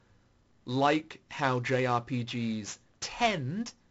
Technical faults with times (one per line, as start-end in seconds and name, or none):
none